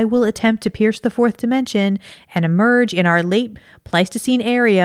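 No technical faults can be heard anywhere in the speech recording. Nothing in the audio calls for comment at any point.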